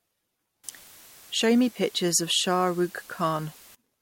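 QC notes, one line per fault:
0.64–3.75 s, low bit depth with dither: the speech is carried on only about 7 bits, and random dither added before rounding turns the coarse quantisation error into a steady, even hiss, roughly 25 dB below the speech, with no grainy distortion on the words. On a spectrogram this appears as a uniform wash across all frequencies that starts and stops abruptly at those times. The waveform shows a raised, constant noise floor filling the pauses.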